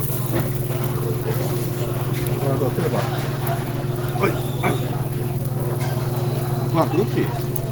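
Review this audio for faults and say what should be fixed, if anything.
Opus compression, likely the cause of the damage heard throughout the clip, from 0 s to the end. The encoder runs short of bits, so rather than leaving gaps it fills bands with folded or noise-like content, and tonal parts of the sound turn rough, grainy and hoarse. The texture points to Opus's hybrid mode, the one built for speech, at a rate around 16 kbps. The bandwidth is not narrowed, since content reaches about 20.2 kHz, but the damage is plainly audible. To prevent it, encode at a higher Opus bitrate or set the encoder to its music mode so it does not fall back to hybrid.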